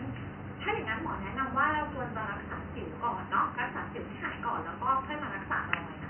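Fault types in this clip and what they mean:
No technical faults can be heard in this speech clip. There is some background noise from the room, sitting about 43 dB below the speech.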